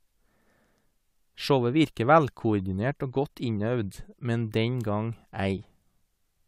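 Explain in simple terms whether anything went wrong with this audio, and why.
Nothing went wrong here.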